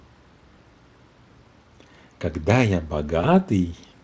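VoIP packet loss concealed by the speech codec occurs at 0.55 to 0.58 s and again at 3.21 to 3.25 s. Each time, about 20 ms of the Speex-coded stream went missing, and the decoder filled the hole by extending the last pitch and spectral envelope at falling gain. The result is a brief smear of buzzy tone or coloured noise where the speech thins and blurs, then needs a few tens of milliseconds to regain its full clarity once data resumes.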